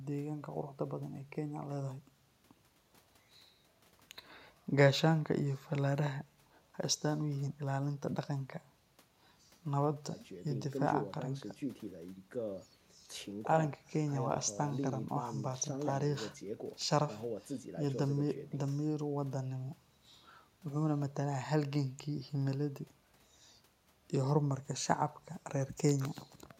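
No technical faults can be heard anywhere in the recording.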